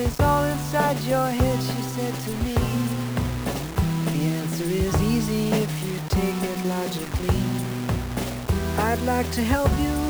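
From start to finish the audio carries a coarse, grainy distortion that rises and falls with the sound itself, sitting only about 15 dB below it. Quiet passages turn gritty and the faintest parts sputter or drop out. That points to low bit depth without dither, likely a reduction to around 5 bits by plain rounding. Unlike steady hiss or dithered noise, this error moves with the signal and vanishes when it stops.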